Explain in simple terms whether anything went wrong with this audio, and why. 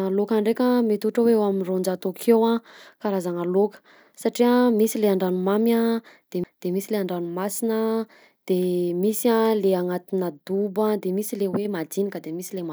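A CD skip at 6.44 s breaks up the speech. A knock or a flaw on the disc made the player's laser jump to another turn of the spiral, so the sound cuts out for a split second and resumes from a different spot.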